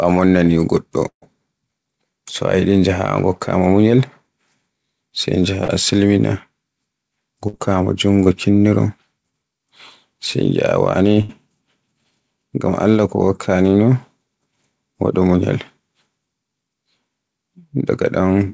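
Speech carried over a call link whose top end stops at 8 kHz, consistent with G.722 at 64 kbps, suffers two kinds of network fault. A burst of packet loss drops runs of packets at 1.08–1.24 s, 7.48–7.55 s and 11.21–11.31 s. The receiver stretches the last sound into a fading buzz or hiss, about 90 ms of it going silent in the first gap, before speech resumes with up to 140 ms missing. Short concealed packet loss at 5.64–5.70 s and 8.23–8.27 s loses 20–40 ms, which is patched from the preceding sound and heard as a brief smear or wobble.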